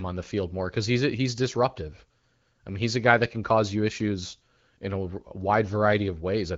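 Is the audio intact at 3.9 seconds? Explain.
Yes, at 3.9 seconds the speech is intact, with no dropout, glitch or other fault at that moment.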